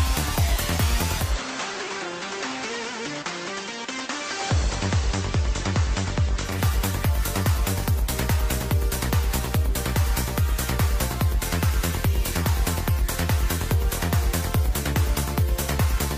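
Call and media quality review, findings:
Digital radio blending to analogue, 1.16–6.62 s. The hybrid receiver lost digital and cross-faded over 191 ms to the FM simulcast, then back. Audio is about 1 dB quieter, with hiss about 30 dB below the signal. Unlike a codec bandwidth drop, hiss arrives.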